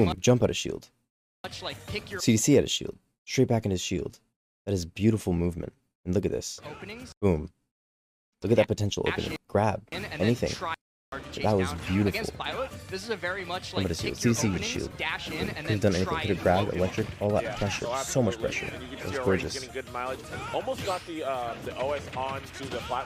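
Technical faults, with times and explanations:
14.59 to 14.91 s, processor overload crackle. For about a third of a second, a gritty crackle rides on the sound. The processor could not keep up with its audio deadlines. Several very short buffers, each under a millisecond, went unfinished. Each one was skipped and left a tiny hole with hard edges. Only a handful were missed, spread across the span, so they read as scattered crackle rather than a dropout. The crackle stops once the load eases.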